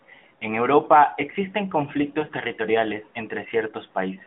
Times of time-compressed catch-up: none

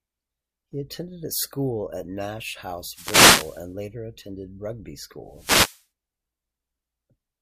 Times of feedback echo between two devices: none

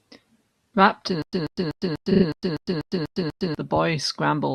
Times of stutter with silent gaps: 1.22-3.55

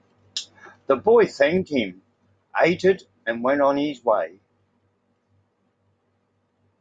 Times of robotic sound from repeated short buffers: none

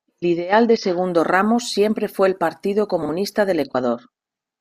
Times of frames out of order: 3.02-3.09

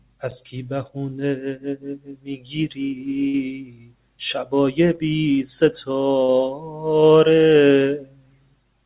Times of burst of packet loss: 3.28-3.35, 6.23-6.30

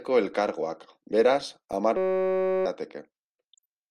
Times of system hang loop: 1.97-2.66

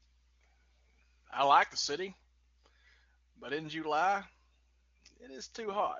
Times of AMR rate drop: 5.64-5.99

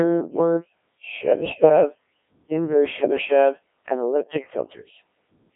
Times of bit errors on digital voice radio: 1.40-1.69

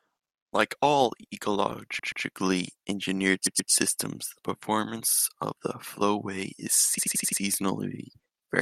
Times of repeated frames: 1.98-2.24, 3.45-3.71, 5.12-5.25, 6.97-7.40

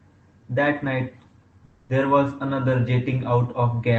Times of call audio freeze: 1.65-1.91

